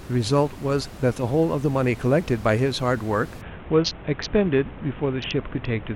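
From 3.41 s to the end, a Bluetooth SBC bit pool drop dulls the treble while a gritty quantisation noise rises, consistent with the bit pool falling from 28 to 5, near 54 kbps. Unlike a plain low-pass filter, it adds grit; unlike a dropout, sound never stops.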